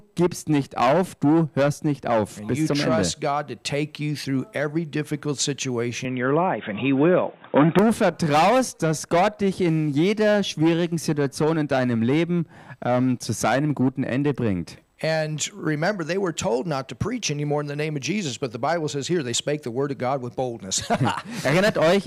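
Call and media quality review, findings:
Sound turns dull and band-limited from 6.05 to 7.79 s, nothing above 3.8 kHz, slight level shift, faint new noise floor, no gap at either edge. Likely input switched to a poorer device, a narrower-band mic or headset call profile.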